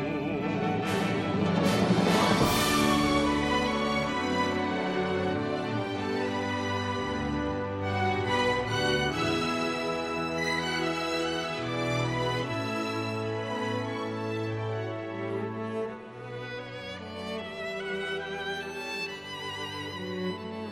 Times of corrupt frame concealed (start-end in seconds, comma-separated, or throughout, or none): none